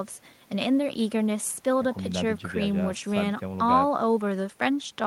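A short speech recording with no technical fault to point to. Nothing in the signal path calls for comment.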